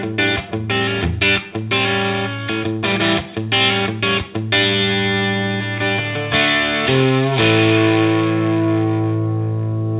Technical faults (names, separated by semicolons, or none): none